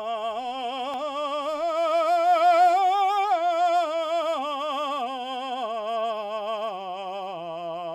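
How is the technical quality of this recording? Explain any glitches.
No glitches or faults detected.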